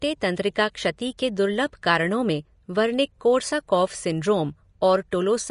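Throughout, the speech is hissy and grainy with nothing above 10.5 kHz, likely Vorbis compression at a rate near 34 kbps; unlike simple low-pass filtering, the remaining treble is roughened into noise. At 1.18 s, just after "तंत्रिका क्षति", and again at 5.11 s, pre-echo puts a brief hiss of about 12 ms ahead of an attack, where block-spread quantisation noise leaks forward rather than trailing it.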